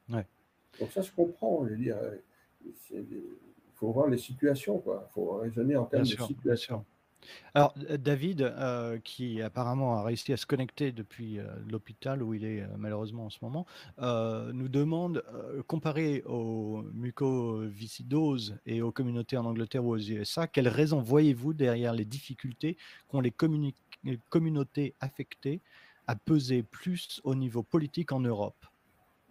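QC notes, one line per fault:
7.61 to 7.65 s, 25.07 to 25.11 s and 27.05 to 27.11 s: short concealed packet loss. About 20 ms, 20 ms and 40 ms of audio never arrived. The receiver extended the preceding sound for 19, 15 and 43 ms, then blended back, leaving a brief smear or wobble. On a spectrogram the harmonics or noise pattern are briefly copied flat across the gap. The waveform shows a smooth, repetitive patch with a slight seam where it rejoins.
10.21 to 10.27 s: burst of packet loss. About 40 ms went missing, and the receiver filled 45 ms by continuing and fading the last sound. The result is a short held buzz or fading hiss before the audio resumes further on. A spectrogram shows frozen, decaying bands, and the waveform shows a tapering envelope with a jump at the rejoin.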